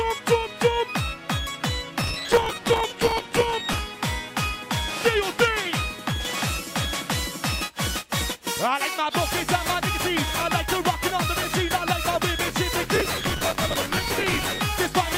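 Processor overload crackle at 2.01–3.78 s and 12.96–14.59 s: missed deadlines repeat old audio in chunks that fit roughly 5 ms buffers, heard as gritty tearing.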